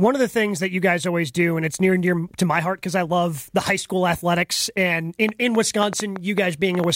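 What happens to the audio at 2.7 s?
Nothing goes wrong at 2.7 s; the speech continues cleanly through that moment with no audible fault.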